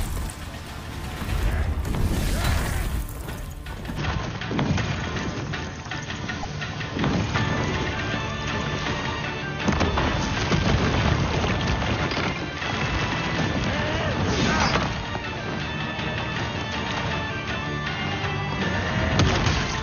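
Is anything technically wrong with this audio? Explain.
Yes, there are two faults.

From 3.98 s to the end, the input likely switched to a poorer device. Everything above 6.6 kHz disappears, so the sound turns duller and boxier. There is no gap at the switch and the level stays roughly the same, but a new noise floor appears about 30 dB below the signal. On a spectrogram this shows as a sudden flat ceiling at 6.6 kHz from 3.98 s onward, with a faint haze of added noise beneath the sound.

At 6.42 to 6.45 s, a short disturbance of about 28 ms points to a broken MP3 bit reservoir. The timing fits the 24 ms frames of MP3. The likely cause is that frames were dropped and the next frame, borrowing data from earlier frames, decoded the wrong bytes. The audio skips forward. A waveform would show a discontinuity there, and a spectrogram a narrow column that matches neither side.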